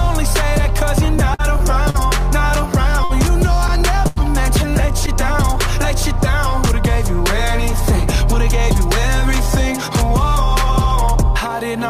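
From 1.20 to 1.96 s there are repeated stalls (stutter). Packets arrived late four times and the jitter buffer kept running dry. The receiver continued the last sound to fill 105 ms in total, the longest gap being 48 ms, so the audio drags and stutters without losing anything.

Two short stalls from a late packet follow, at 3.04 to 3.12 s and 4.08 to 4.18 s. Each time a single late packet emptied the buffer, and the last sound was held for 57 ms and then 86 ms before playback resumed from the same point.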